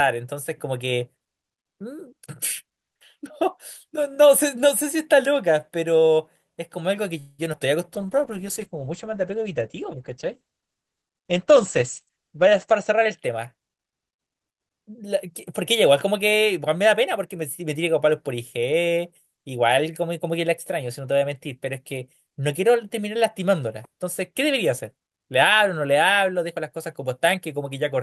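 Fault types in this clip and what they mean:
call audio freeze: Packets likely stalled in transit and left the jitter buffer with nothing to play. From 7.19 to 7.41 s the receiver stretches the last sound into a fading buzz for about 0.19 s, with no drop to silence. When audio resumes it picks up exactly where it stopped. Nothing is lost, but a pause has been inserted and everything after it arrives that much later.
short concealed packet loss: Twice, right after the freeze, about 20 ms of audio failed to reach the decoder in time, at 7.53 s and again at 7.59 s. Each time the receiver covered the hole by extending the preceding sound and then crossfading back into the real signal. The first patch is only about 5 ms and the second about 13 ms. Both come across as tiny smears or wobbles in quick succession.
call bitrate drop: The call's bandwidth estimate collapsed, so the encoder was told to cut its rate from 48 to 11 kbps. 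It stays at the bottom for almost 5 s, between 7.95 and 13.25 s. At that rate the coding gets coarse and the audio bandwidth shrinks from 20 kHz to 8 kHz. The sound turns dull, muffled and somewhat watery, losing its crisp top end until the rate climbs back.
jitter buffer speed-up: The buffer ended up holding more audio than its target. To shed that excess delay, the receiver repeatedly cut out short pitch-period slices from 12.09 to 14.28 s, removing about a fifth of a second in total. Playback runs at 108% of normal speed with unchanged pitch. The passage sounds slightly rushed, and it overlaps the tail end of the muffled low-bitrate stretch.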